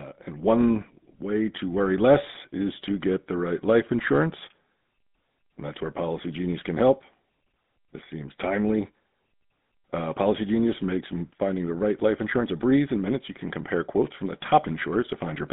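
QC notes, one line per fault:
Throughout: GSM full-rate codec. The speech was coded with a vocal-tract model driven by a sparse, evenly spaced pulse excitation, which fits a 13 kbps full-rate stream, and the line passes only about 150 Hz to 3.7 kHz. Plainly audible buzzy, gravelly roughness overlays the voice, and nothing bright survives above the band.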